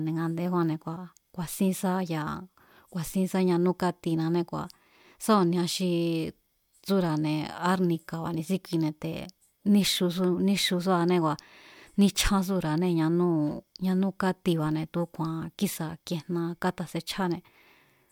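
No technical faults are audible.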